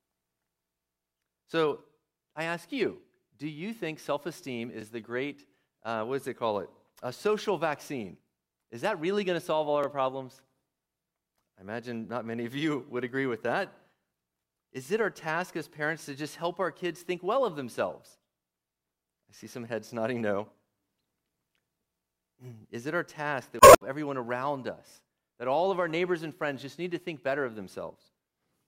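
A speech recording with two kinds of technical fault. Overlapping chunks produce a click or stutter at 4.81, 9.84 (just after "going to solve all"), 14.86 (just before "it our task as"), 19.88 and 24.91 s. The audio was handled in 5.0 s blocks, and each block begins about 23 ms before the previous one finished, so that sliver plays twice at every join. On a waveform, each seam shows a step discontinuity with a short repeated segment. On a spectrogram, it appears as a vertical line at about 5 s spacing. Damaged data in a compressed stream causes a brief glitch from 23.57 to 23.81 s, between "it our task" and "everyone around". Corrupted bytes there made the decoder misread frames, lose sync and hunt for the next valid header. A spectrogram shows a quarter-second disturbance cutting across the speech harmonics.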